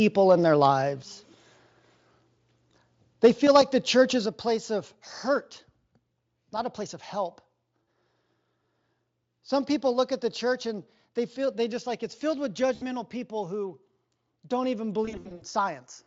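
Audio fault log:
1.02 s and 4.26 s, microphone volume stepped down: right after "in their", and again between "the church is" and "a place of", the whole level, voice and room alike, drops in one step, by about 4 dB the first time and about 5 dB the second. It's a sudden shelf, not a fade, so it's most likely the call software deciding the mic was running hot and pulling the input volume down.
3.24 to 3.58 s, microphone overload: for about a third of a second the loudest peaks flatten against the converter ceiling, pushing roughly 5 dB past it with a couple of percent of samples clipped. That's where the harsh, crackly edge on those syllables comes from. The likely cause is the mic input volume set too high.
7.83 s, 12.75 s, and 15.05 to 15.43 s, VoIP packet loss concealed by the speech codec: the first dropout is about 40 ms and the second about 60 ms. The third starts after "don't even" and is about 240 ms of losses spread across roughly 360 ms, with the longest single gap around 60 ms. 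Each time, the Speex decoder stretches the last bit of sound into a buzzy tone or a coloured noise that fades, and the voice stays thin for a moment after real audio comes back.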